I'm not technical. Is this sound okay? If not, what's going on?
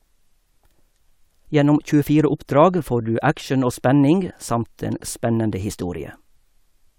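Yes, nothing technically wrong can be heard in this recording; it stays steady and intact throughout.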